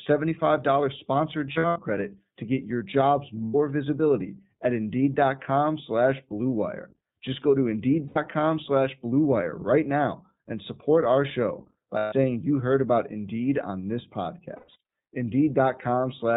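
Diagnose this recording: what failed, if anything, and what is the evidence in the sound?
The codec stage is at fault here: the whole file has passed through iLBC, and the damage is plainly audible. Nothing above 4 kHz survives, so it's strictly narrowband, and the speech comes across rough and a bit synthetic. That texture fits iLBC's 15.2 kbps mode with 20 ms frames, where each frame's excitation is coded on its own without borrowing from the previous one.

The network dropped packets in five spots, which shows up as lost iLBC frames. The first is at 1.52 to 1.79 s, with about 180 ms missing in short runs. After "to get your jobs" there's a 100 ms gap at 3.44 s before "visibility at". Right after "go to", another 100 ms drops at 8.06 s. Then 140 ms goes missing at 11.98 s, between "support our show by" and "you heard about". The last is at 14.56 to 14.77 s, about 180 ms lost in short runs. 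Each gap comes out as a held, buzzy or breathy vowel. That's the decoder repeating the last pitch cycle mixed with noise. Because each iLBC frame stands alone, the voice snaps back right away.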